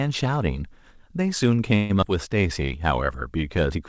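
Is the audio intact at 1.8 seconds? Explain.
No. A call audio freeze runs from 1.76 to 1.91 s, most likely because delayed packets left the jitter buffer empty. The receiver stretches the last sound into a fading buzz for about 135 ms, then resumes where it stopped, so nothing is lost but everything after arrives 135 ms later.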